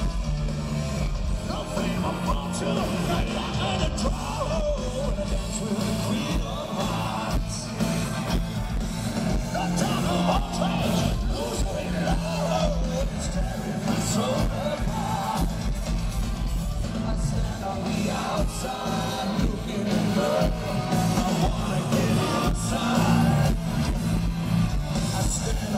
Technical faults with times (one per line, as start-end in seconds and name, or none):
none